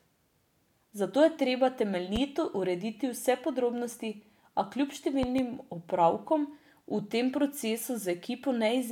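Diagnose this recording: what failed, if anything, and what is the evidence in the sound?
A loud pop at 2.16–2.19 s before "urediti vse podrobnosti" and a double pop at 5.23–5.42 s before "opravkom v tem" stand well above the speech, likely from voltage steps in the analogue wiring.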